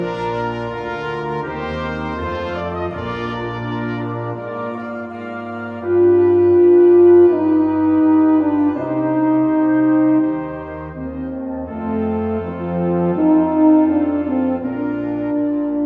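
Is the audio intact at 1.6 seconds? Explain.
Yes, the audio is intact at 1.6 seconds, with no fault to be heard at that moment.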